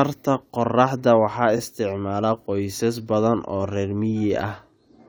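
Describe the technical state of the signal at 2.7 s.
At 2.7 s the speech signal is intact, with no audible technical fault at that moment.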